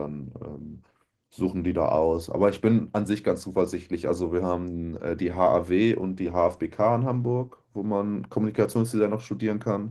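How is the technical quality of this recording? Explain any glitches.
The recording is clearly degraded by compression throughout. Opus voice compression is plainly audible from start to finish. The speech sounds like Opus in hybrid mode: a linear-prediction coder handles the band below 8 kHz, and a transform layer fills in the top of a fullband signal. The excitation is coded coarsely, which fits a rate near 16 kbps with 20 ms frames. So the voice comes out hoarse and slightly robotic.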